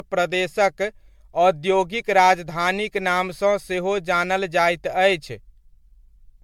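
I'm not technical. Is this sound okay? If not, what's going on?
No. Throughout the whole clip, the speech sounds swirly, smeared and hollow. Sharp starts of sounds are blurred rather than crisp. This is generation loss. The likely cause is that the recording was saved as an MP3 file many times over, roughly seven times in a row. Each save throws away a little more detail in a slightly different place. Those small losses pile up into the watery, hollow sound you hear.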